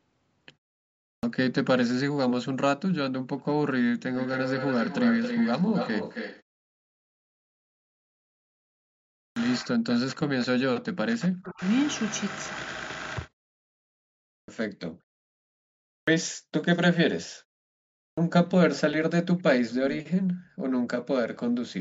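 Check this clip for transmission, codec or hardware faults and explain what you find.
Yes, there are three kinds of fault: clipped starts after pauses, echo leak, and speech suppressed during double talk.

Clipped start after a pause occurs at 1.08, 9.22, 14.35, 15.93 and 18.03 s. Each comes after a silence of 0.58 to 2.88 s. The output device drops into a sleep state when the signal goes quiet. It then needs time to wake before it passes audio again. Between 132 and 151 ms of each onset is lost. The speech jumps in abruptly, missing its first sounds.

Echo leak appears four times. From 4.15 to 6.47 s, a copy of the speech trails by 269 ms at about 5 dB below the direct signal. From 19.38 to 20.01 s it returns with a 299 ms lag, at about 10 dB down. Fainter traces, about 30 dB down, follow at 15.01 to 15.35 s (289 ms) and 21.34 to 21.38 s (302 ms). The likely cause is a loudspeaker on the far end whose echo canceller let part of the pickup through.

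Speech suppressed in double talk runs from 9.60 to 11.63 s, about two seconds in total. The speech dips sharply, by roughly 40 dB at its deepest. This likely happened because both sides spoke at once. The echo canceller could not separate the local talker from the loudspeaker echo, so it turned both down. The dip begins just after the clipped start at 9.22 s.

Nothing is heard above 8 kHz, consistent with normal call microphone processing.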